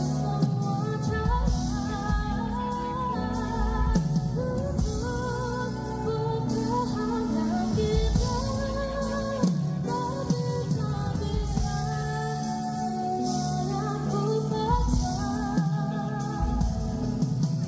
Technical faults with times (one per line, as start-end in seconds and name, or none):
none